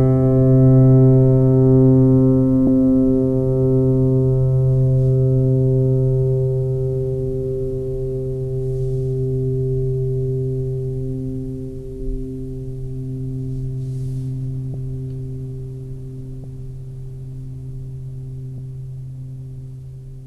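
At 2.67, 11.99, 14.74, 16.43 and 18.58 s, compressed frames are skipped. The music jumps ahead by a few tens of milliseconds, roughly one to four 26.1 ms frames. Overlapping frames smear each join into a soft blip rather than the hard click of a sample-level dropout.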